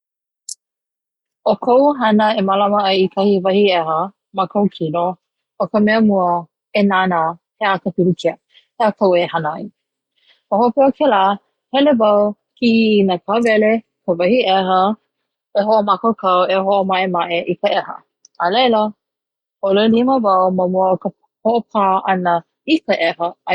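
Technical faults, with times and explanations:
No technical faults detected in this speech recording.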